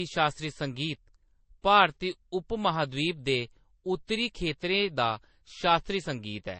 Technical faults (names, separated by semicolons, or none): transcoding between lossy codecs